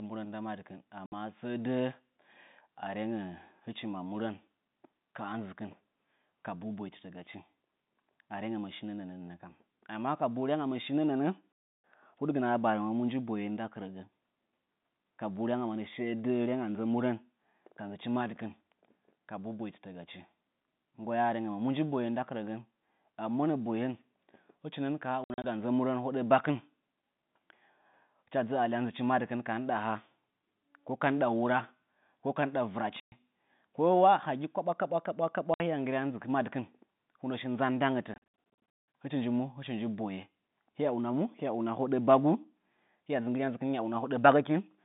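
Packet loss filled with silence punches holes at 1.06 s (before "səə dəə"), 11.55, 25.24 (after "hɨchi nɨn ka haa"), 33.0, 35.54 and 38.14 s. Missing packets became digital silence, 60 to 480 ms, fitting 20 ms packets. The holes show as flat waveform gaps and blank spectrogram strips.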